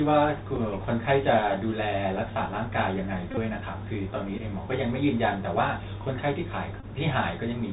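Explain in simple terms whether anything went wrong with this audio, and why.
Yes, two things went wrong. Throughout, the speech comes through the Bluetooth CVSD headset codec, an old phone-call format that cuts everything above 4 kHz. S sounds turn scratchy and a grainy hiss follows the voice, unlike steady background noise.

There are also Bluetooth headset packet repeated faults at 0.56, 3.31 to 3.38, 4.38 to 4.41 and 6.80 to 6.84 s. Lost bits of sound were replaced by replaying the previous packet, so they stutter rather than going silent. The short ones are small ticks. At 3.31 s the replays come in quick runs, giving a brief buzz near 267 Hz.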